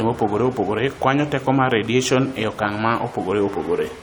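A short speech recording, with no technical fault to be heard anywhere in it. Nothing in the audio calls for a time stamp or a cause.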